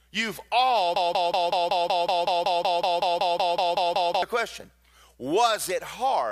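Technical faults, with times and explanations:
0.96–4.23 s, broken-record loop: a fragment of speech about 0.19 s long plays back to back, repeated 17 times, with identical content and timing on each pass, so it sounds like a stuck mechanical tic rather than a natural stutter. The likely cause is a stalled player, encoder or stream that kept resending the last buffered piece it held. The speech that should have filled those three seconds is lost.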